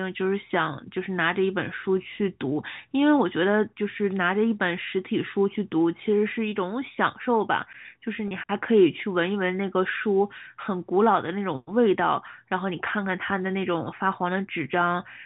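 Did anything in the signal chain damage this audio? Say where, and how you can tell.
Yes, at the network: packet loss with pitch repetition around 8.28 to 8.31 s. About 30 ms goes missing, which fits one lost packet, and the receiver loops the last pitch period, giving a brief buzzy hold in the speech.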